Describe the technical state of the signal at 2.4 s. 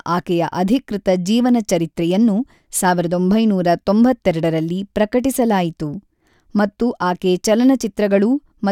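At 2.4 s the speech signal is intact, with no audible technical fault at that moment.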